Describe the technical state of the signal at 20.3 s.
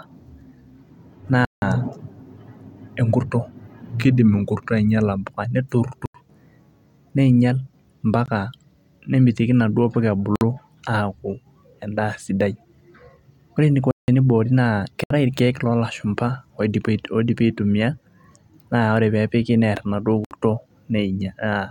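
A block of digital silence runs from 20.25 to 20.31 s, a gap of about 64 ms in the speech. The samples there drop abruptly to silence and return without any fade, and the stretch is heard as a short hole.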